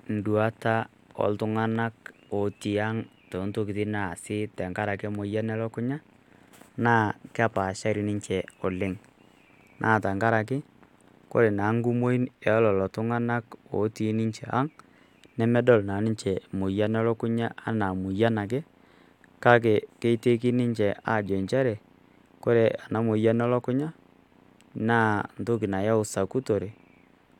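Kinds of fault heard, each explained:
Nothing wrong turns up here at all, so there's no kind of fault to list for this bit of speech.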